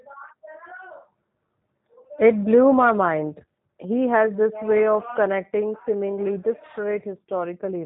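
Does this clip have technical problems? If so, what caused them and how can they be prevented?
Yes. For the whole clip the speech sounds rough, buzzy and slightly synthetic, with a dull, telephone-like tone because nothing above about 3.8 kHz comes through. This is G.729 codec damage, and it is plainly audible. The codec discards the waveform and rebuilds each short frame from a vocal tract filter, a pitch predictor and a handful of pulses. That coarse model, which fits an 8 kbit/s G.729A stream, creates the artificial edge, and the codec's narrowband design removes the upper frequencies. To prevent it, record or transmit with a wideband codec such as Opus or G.722, or capture the audio locally before it passes through the VoIP link.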